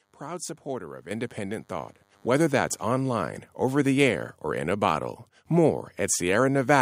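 DECT cordless phone buzz runs from 0.0 to 3.18 s, ending just before "over the air or". A nearby DECT handset or base transmits a brief radio burst every 10 ms, and the audio circuitry rectifies that energy into the signal. The result is a thin, steady buzz with a 100 Hz fundamental and a dense stack of harmonics, sitting roughly 40 dB below the speech.

Microphone volume stepped up occurs at 1.11 s and again at 2.13 s. Each time, the call software judged the microphone too quiet and raised the device's input volume in a single jump instead of ramping it. The first step adds 7 dB and the second adds 5 dB. The speech and the room sound both become abruptly louder together at each point, with no gradual transition.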